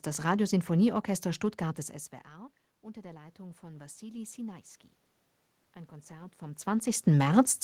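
Speech in which automatic gain rising occurs twice. After the talker moves back from the microphone around 1.5 s and the input falls by about 21 dB, the gain control slowly lifts its level by about 4 dB from 2.29 to 4.46 s. It does the same again from 6.07 to 7.59 s, just after another movement near 6 s. The room noise swells along with the voice, so the waveform envelope and the spectrogram's noise floor between phrases both rise gradually together.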